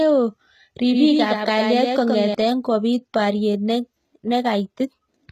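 Throughout the speech, the treble has a gritty, metallic edge, and s sounds come out lispy, which points to HE-AAC compression at a low bitrate, likely near 20 kbps. A spectrogram shows nothing above 14.9 kHz and a copied-looking, blocky upper band whose harmonics don't line up with those below.

From 0.91 to 2.35 s, just before "kopit pariet", a doubled audio track appears: a full-band copy trails by roughly a tenth of a second, a few dB quieter. It likely comes from a second capture path. The waveform shows a shifted duplicate that starts and stops abruptly, with no decaying tail.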